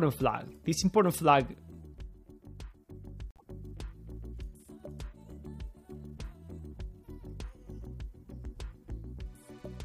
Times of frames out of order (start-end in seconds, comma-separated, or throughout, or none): 3.31-3.43